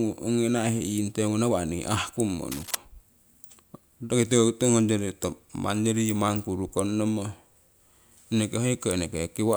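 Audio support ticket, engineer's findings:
Cable scratch noise, 2.52–2.75 s, right after "naihe iingteungu nawa'nii ahkummo". Likely a worn cable or connector shifting, with contact resistance fluctuating rapidly. Symptom: dense, uneven scratching bursts over the speech, roughly 10 dB below it, lasting about a quarter second.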